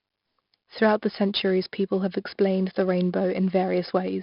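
From start to finish, the speech carries 4-bit ADPCM compression, and the damage is heavy. Each sample is coded as a coarse 4-bit step from a predicted value. The step size adapts more slowly than the sound changes. The error rides along as a gritty hiss under every loud syllable. Sharp onsets smear into distortion. Nothing sounds above about 5.3 kHz, so the top end is dull. That fits a data rate near 44 kbps and a low sample rate.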